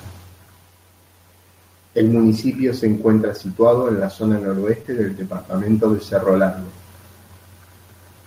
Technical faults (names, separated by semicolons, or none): lost packet rebuilt from error correction; short concealed packet loss